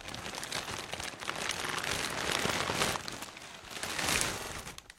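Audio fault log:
1.63–1.73 s and 4.37–4.47 s, repeated frames: each time a 46.4 ms block plays three times in a row, which fits a single compressed frame being duplicated. This adds about 93 ms per event and gives a brief stutter. Unlike a dropout or glitch, nothing is lost or garbled; the identical slice simply recurs.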